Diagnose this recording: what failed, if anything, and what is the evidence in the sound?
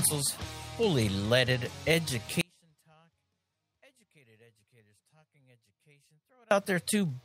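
At 2.41 s the sound cuts abruptly to a faint leak, roughly 35 dB down, and snaps back at 6.51 s, 4.1 s later. This audio dropout to a faint residue likely comes from an intermittent analogue connection: the signal broke while the downstream path stayed live.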